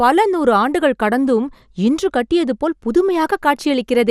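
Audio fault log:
throughout, MP2 compression: the speech sounds dull, with a gurgling, granular roughness. On a spectrogram nothing appears above 14.4 kHz, and the upper region shows blocky patches that flicker on and off from frame to frame rather than smooth harmonics. The likely cause is MPEG Layer II coding short of bits, which fits a rate around 80 kbps. Upper sub-bands get switched off, and the remaining bands are coarsely quantised.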